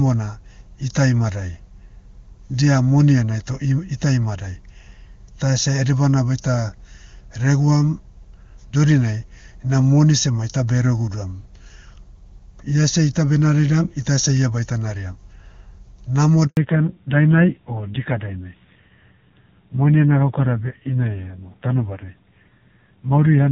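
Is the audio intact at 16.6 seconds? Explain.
No. At 16.6 s the call has just undergone a fallback to narrowband, a drop from HD Voice to an older low-rate codec after a handover gap from 16.47 to 16.57 s.

The handover gap is a 100 ms silence while the call switched networks. It looks like a flat stretch in the waveform and an empty column on the spectrogram.

From 16.57 s to the end, nothing above 4 kHz remains, so the sound is duller and rougher. The raspiness fits a low-rate narrowband codec. On a spectrogram the upper band is sharply cut off at 4 kHz.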